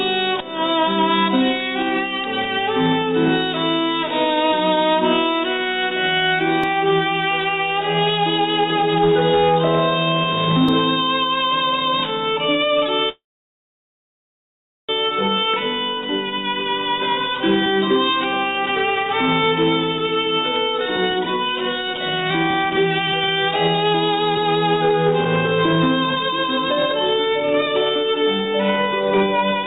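At 6.64 s and again at 10.69 s there is a small jump in the sound, each losing only a few milliseconds. These are most likely dropped buffers (overrun), where samples were overwritten before the software collected them and the two sides were spliced together with no gap. On a waveform each shows as a sudden step in the trace. On a spectrogram each is a thin vertical broadband line.

From 13.09 to 14.92 s the audio stops in a call audio freeze. The last sound is held briefly as a fading buzz, and then about 1.7 s of silence follows. The cause is probably late packets draining the jitter buffer. When playback resumes it continues from exactly where it halted, so nothing is lost, but roughly 1.8 s of gap has been inserted. The waveform shows a short decaying tail and then a flat line. The spectrogram shows a smeared, repeated slice fading into an empty band.

From 19.98 to 25.48 s, and again from 26.04 to 29.64 s, there is a jitter buffer speed-up. 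The receiver trims many pitch-period-sized pieces to shed excess delay, removing roughly a second in the first stretch and about 0.7 s in the second. The audio runs at 116% and then 119% speed with unchanged pitch, so it sounds hurried. On a spectrogram, events crowd closer in time while the harmonic spacing stays constant. Throughout the clip, nothing appears above 4 kHz, consistent with a narrowband G.711-type call path.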